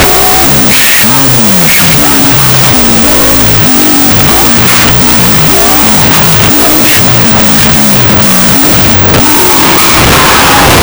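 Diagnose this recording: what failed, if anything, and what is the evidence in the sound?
The whole recording is buried under loud, harsh noise, with a trace of the original sound underneath, running at half speed and an octave low from start to end. This is a wrong sample width fault at the sample-format conversion stage. The pattern fits 16-bit integer data being read as unsigned 8-bit. Each original sample is split into two bytes, doubling the sample count and halving the speed. Only the high bytes keep the real signal's shape, while the low bytes contribute the noise.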